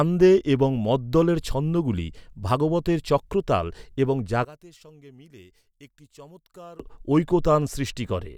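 Right after "ছন্দগুলি ভাগবতের চক্রতাল এবং", from 4.45 to 6.80 s, the voice sinks about 23 dB, likely one channel inverted, cancelling the centre in mono.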